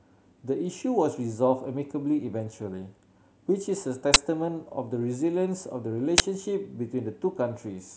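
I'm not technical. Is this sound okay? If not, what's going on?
No. The speech is interrupted twice by a sharp, very loud burst of harsh digital noise, at 4.14 to 4.16 s and again at 6.18 to 6.20 s. Each lasts 20 milliseconds. This is an uninitialised buffer: the playback system sent out a 20-millisecond block of memory before any audio had been written into it, so whatever leftover data sat there was played as sound instead of the recording.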